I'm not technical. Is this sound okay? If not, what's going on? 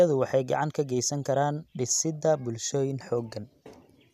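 Yes, it sounds fine; I hear no problems.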